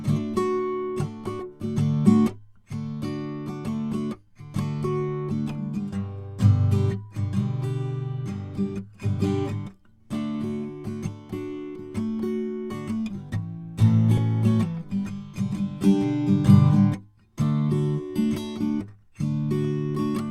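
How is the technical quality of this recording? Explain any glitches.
The music has two glitches from compressed frames skipped, at 1.39 s and 14.17 to 14.19 s. Each time, roughly a tenth of a second of audio, about seven 20 ms frames, goes missing. The music leaps forward, not into a silent gap.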